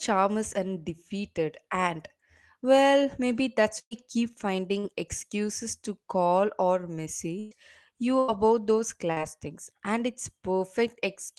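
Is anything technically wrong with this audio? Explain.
Yes, the speech has five network dropouts of two kinds.

A burst of packet loss occurs at 3.79–3.94 s, at 7.39–7.54 s just after "excuses to call or", and at 8.19–8.31 s. About 80–120 ms of audio went missing each time. The receiver stretched the last sound into a fading buzz or hiss, which at 3.79 s dies to silence, and then speech resumes with that stretch skipped.

Short concealed packet loss occurs at 4.79–4.86 s, just before "excuses to call or", and at 9.12–9.19 s. Only about 40 ms was lost, and it was filled smoothly from the preceding sound. It is heard as a brief smear or wobble rather than an audible held tone and gap.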